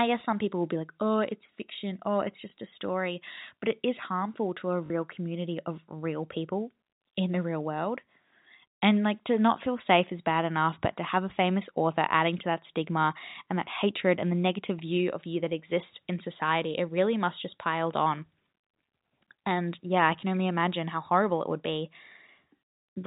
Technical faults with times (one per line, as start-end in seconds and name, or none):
2.50-2.52 packet loss with last packet repeated
4.86-4.90 packet loss with last packet repeated